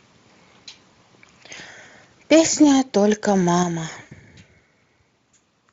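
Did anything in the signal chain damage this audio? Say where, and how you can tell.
Yes. At the network stage, speech packets went missing around 0.93 s and 4.01 to 4.14 s. The decoder filled about 20 ms, then 100 ms, with fading, extrapolated sound: VoIP packet loss concealed by the speech codec.

At the converter, loud syllables from 2.31 to 2.64 s have flattened, crackling peaks running about 4 dB past full scale. This is likely microphone overload from excessive input gain.

In call processing, the level of voice and background drops abruptly by about 4 dB at 2.64 s and about 6 dB at 3.63 s. The microphone volume was likely stepped down by automatic gain control.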